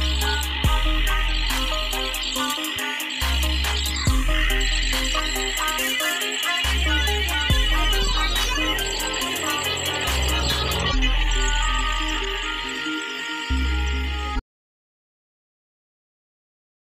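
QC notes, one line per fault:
14.4–17.0 s: audio dropout to silence. The sound cuts off mid-flow into silence, no room tone, running to the end. Likely a lost input with the recorder still writing silence.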